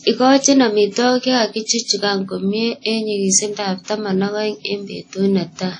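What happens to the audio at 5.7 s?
At 5.7 s the speech sounds washy and ringing, with a hiss that swells and fades with the signal and nothing above 10 kHz, as it does across the whole clip. The likely cause is WMA compression at a low rate, around 32 kbps, where long transform blocks smear quantisation noise and weak detail is discarded.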